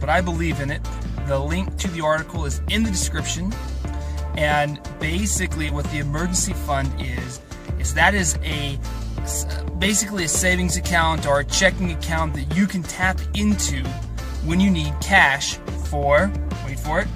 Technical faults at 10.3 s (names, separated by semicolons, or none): none